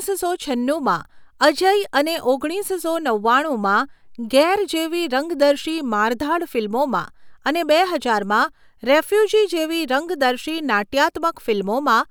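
No technical faults can be heard anywhere in this recording of speech. Nothing breaks in or interrupts the sound at any point.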